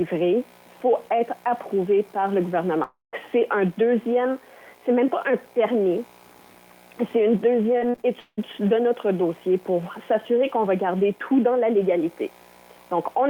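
At 2.83 s the stream most likely suffered a long network dropout, with about 0.3 s of audio that never reached the receiver. The player tries to bridge the hole by stretching the last sound it had, so a brief buzzy continuation is heard that fades out. Roughly 0.17 s of near silence follows before the sound resumes at 3.15 s, with the missing portion simply gone rather than delayed.

From 7.73 s to 8.39 s, packets are lost or arrive too late again and again. This is repeated packet loss. About six separate holes fall within this span, the longest about 178 ms. Each hole is patched by extending the preceding sound, and these patches cover roughly 43% of the stretch. The result is choppy, with fragments dropped out between the patched pieces.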